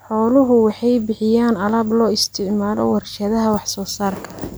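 A short recording of speech, with nothing technically wrong to report. No faults can be heard at any point in it.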